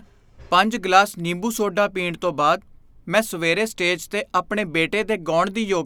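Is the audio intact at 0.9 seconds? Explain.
Yes, at 0.9 seconds the speech is intact, with no dropout, click, distortion or other fault to be heard at that moment.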